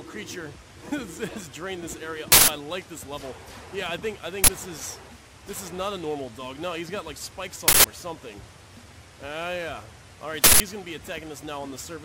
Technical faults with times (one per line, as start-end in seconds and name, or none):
2.32-2.48 uninitialised buffer
4.44-4.48 uninitialised buffer
7.68-7.84 uninitialised buffer
10.44-10.60 uninitialised buffer